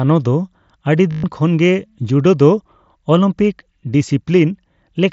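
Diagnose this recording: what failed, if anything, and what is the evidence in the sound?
Bluetooth link: concealed headset packet loss, 1.12–1.24 s. For 120 ms, looped waveform replaces the lost packets as a held buzzy tone that warbles when speech resumes. A plain dropout would fall silent instead.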